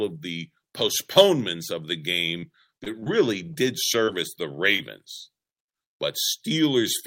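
Speech, with repeated packet loss (robotic sound) from 2.37 to 3.08 s. Short gaps recur, each patched by extending prior audio, so about 15% of the stretch is concealed and it sounds choppy. Short concealed packet loss then briefly smears the sound at 4.05 and 4.76 s. Each gap is about 20 ms and is filled by continuing the preceding sound.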